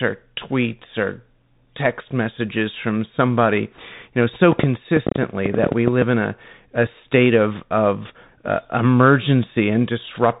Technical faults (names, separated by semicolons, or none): Bluetooth CVSD headset codec; bit errors on a Bluetooth voice link; train of clicks